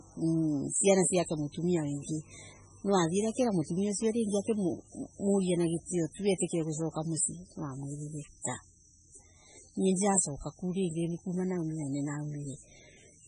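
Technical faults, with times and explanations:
Throughout, MP3 compression: the speech sounds watery and swirly, and nothing is heard above about 10.4 kHz, which points to a starved, very low bitrate around 16 kbps and is likely from an MP3 encoder. With so few bits, the encoder drops the treble at a fixed cutoff and silences weaker frequency lines. Those lines flicker on and off between frames, giving a metallic, chirpy texture to s sounds and blurring the onsets of syllables.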